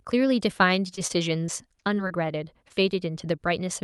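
From 0.95 to 2.30 s the speech breaks up with repeated packet loss, giving a robotic sound. Seven gaps, the longest 27 ms and about 80 ms in all, are patched by extending the preceding sound, so roughly a tenth of this stretch is synthetic. On a spectrogram the patches show as smeared, overly regular harmonic bands. The waveform shows short, too-periodic segments where the natural variation drops out.

At 2.68 to 2.72 s there is a short concealed packet loss. About 20 ms failed to arrive, and a 14 ms fill bridges the hole before blending back into the real audio. It is heard as a brief smear or wobble, visible on a spectrogram as a thin vertical discontinuity and in the waveform as a small splice.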